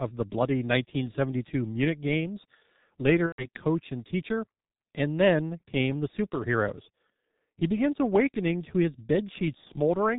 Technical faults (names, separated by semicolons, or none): G.723.1 codec; VoIP packet loss concealed by the speech codec